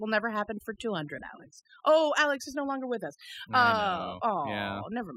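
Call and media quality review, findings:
Overdone noise removal, throughout the clip. Background between phrases drops to near silence with twinkling specks of residual noise. Probable component: noise suppressor set too aggressively. It pulls individual frequency bands far down or off whenever they sit close to its noise estimate. Low-level parts of the speech fall under that threshold and are stripped along with the noise.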